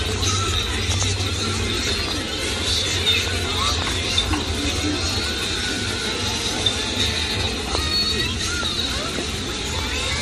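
Throughout, a resampler restarted on every block, converting 24 kHz to 48 kHz in 10 ms chunks, leaves an edge error every block, a 100 Hz buzz that, unlike mains hum, disappears in silence.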